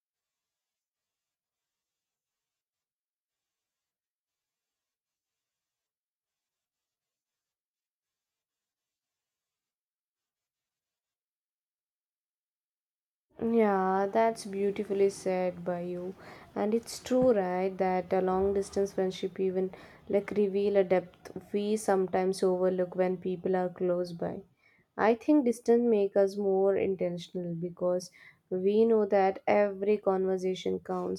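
No technical faults are audible anywhere in this speech recording.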